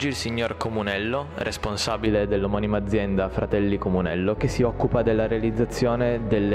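From 2.06 s to the end, the sound turns dull and muffled, as if a blanket had dropped over it, with the top end sloping away smoothly and no sharp edge. At 10 kHz it sits about 11 dB below its level at 1 kHz. This is de-emphasis applied wrongly: a treble-cut curve meant to reverse pre-emphasis was applied to audio that had none, or was applied a second time, removing high frequencies that belonged in the signal.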